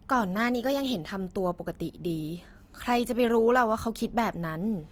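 Throughout the speech, Opus compression damage is plainly audible as a rough, grainy, noisy texture: band energy survives, but fine detail is filled with folded or noise content. The likely cause is CELT-mode coding at a rate that fits 24 kbps, with bandwidth still reaching 20.2 kHz.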